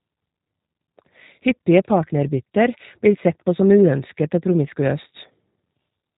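All the way through, the speech carries plainly audible G.729 coding, likely the 8 kbit/s mode: nothing above 3.8 kHz, with a rough, synthetic, buzzy edge on every phrase.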